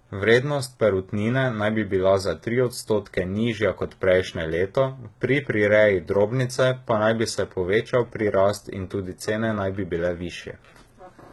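Right from the start and all the way through, the speech has that synthetic, papery top end you get from heavy HE-AAC compression, likely squeezed down to something like 16 kbps. The low and mid range is coded properly, but the treble is faked by copying lower bands upward and roughly reshaping them. The high harmonics don't line up with the real ones below, so s sounds come out gritty and lispy, with a metallic sheen.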